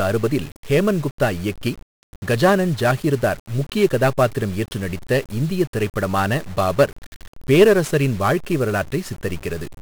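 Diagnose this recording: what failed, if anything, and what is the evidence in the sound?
The failure is at the codec stage: 1-bit DFPWM compression across the whole speech clip. Every syllable carries a fuzzy, crackling grain, and the upper treble is buried under broadband hiss. The damage is heavy, which fits a 48 kbps stream at one bit per sample. Each bit only nudges an adaptive charge up or down, so the waveform staircases and the error spreads across the spectrum. Unlike a perceptual codec's swirly band-limiting, this noise is coarse, broadband and tracks the signal.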